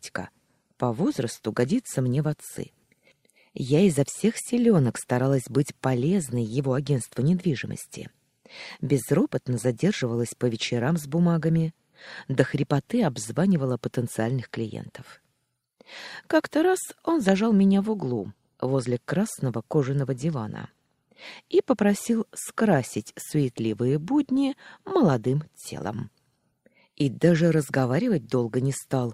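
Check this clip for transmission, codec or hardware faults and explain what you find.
No transmission, codec or hardware faults can be heard anywhere in the signal.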